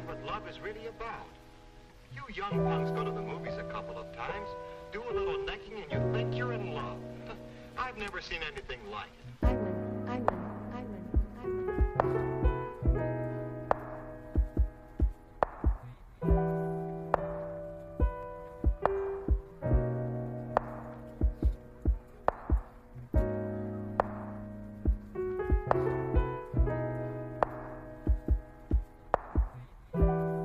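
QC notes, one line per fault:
11.81 s and 18.23 s, dropped samples: each moment carries a single sharp click and a thin vertical line across the spectrum, with nothing audibly missing on either side. The likely cause is a handful of samples, around a tenth of a millisecond, vanishing from the stream so the waveform jumps straight to a later value. That is far too brief to remove any sound, which is what sets it apart from a dropout, where a real gap of silence is heard.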